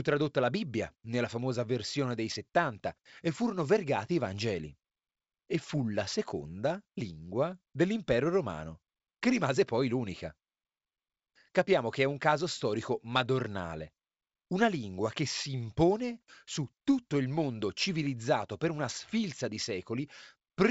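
No technical faults can be heard in this speech clip. It has passed through G.722 wideband telephone coding, which fits 64 kbit/s, and the sound stops at about 7.7 kHz, with at most a faint trace of the coding.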